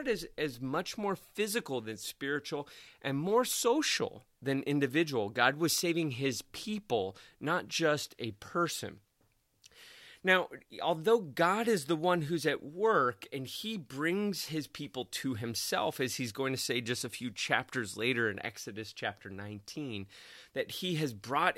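Nothing goes wrong technically anywhere in this bit of speech, so there's no fault to point to at any moment.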